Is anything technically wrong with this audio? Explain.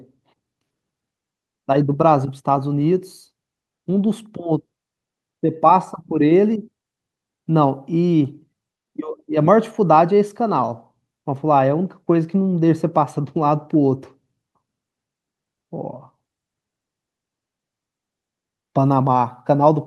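No, nothing technically wrong here.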